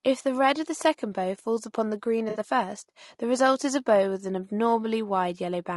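From the start the speech sounds rough and grainy, with noise filling the gaps between harmonics and a thin, somewhat synthetic top end. This is likely low-delay AAC compression such as AAC-ELD, whose short frames resolve pitch poorly, and the plainly audible damage fits a low bitrate around 32 kbps.

From 2.29 to 2.39 s the speech smears into a brief noisy, phasey patch. This is AAC frame loss with concealment. About 60 ms of audio went missing, consistent with three lost frames, and the decoder filled the gap by reusing the last good spectrum.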